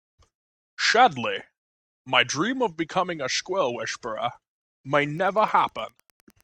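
From 5.08 s to the end of the speech, a faint, steady ticking sits well beneath the voice, repeating about ten times a second. This is Wi-Fi interference: a nearby Wi-Fi radio transmits its beacon every 102.4 ms, and the audio circuit rectifies each burst of radio energy into a small click. Because the beacon keeps strict time, the clicks form an even, mechanical pulse rather than random crackle.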